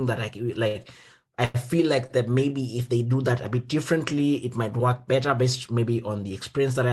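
A speech recording carried over a call codec, with three short stalls from a late packet. They fall at 0.67 to 0.77 s after "that I", at 1.45 to 1.56 s, and at 2.06 to 2.11 s after "I feel". Each time the next packet was late and the jitter buffer ran dry. The receiver held the last sound for 76, 93 and 31 ms, then resumed. Nothing is lost. The sound just drags, and the delay grows.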